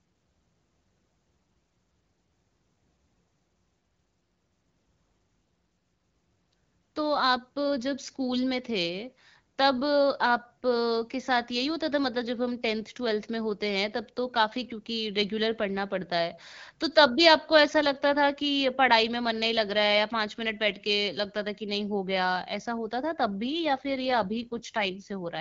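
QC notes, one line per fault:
23.76–24.96 s, AMR rate drop: for just over a second near the end the speech turns rougher and more synthetic, with a grainy, buzzy edge, then the rate recovers shortly before the clip ends. The codec stepped down from 12.65 to 8.85 kbit/s as the link weakened, so fewer bits describe the vocal tract and excitation pulses. On a spectrogram the band edge stays put and there is no gap; harmonics smear and formant detail coarsens, while the waveform stays continuous.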